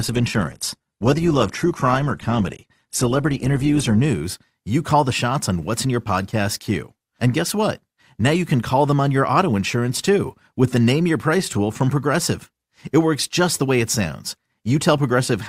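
Speech that opens on a low-bitrate version of an adaptive stream. For the first 4.0 s the sound is thin and smeared. Nothing reaches above about 12.3 kHz, and codec artefacts are plain. The player began on a cheap rendition to start quickly. At 4.0 s it switches to a better one after measuring the connection. Quality jumps at once, with no gap. The before and after suggest a step from about 16 to 64 kbit/s Opus.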